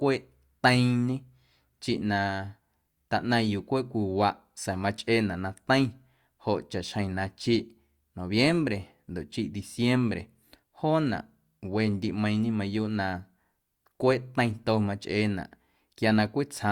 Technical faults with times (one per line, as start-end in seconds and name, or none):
none